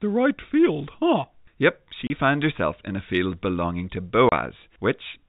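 At 2.07 s and again at 4.29 s the speech cuts out for 30 ms. Each is packet loss filled with silence: audio that fits one lost 30 ms packet never arrived, and the receiver played silence instead, leaving a short hole with abrupt edges in the telephone-band signal.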